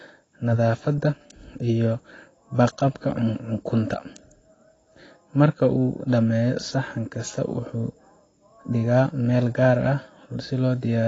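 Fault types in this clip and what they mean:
AAC compression: throughout, the speech stops dead at 8 kHz and carries plainly audible smearing, with a fizzy, warbling texture on sibilants. The likely cause is an AAC-LC encoder short of bits, quantising coarsely and pulling its cut-off down, which fits about 24 kbps.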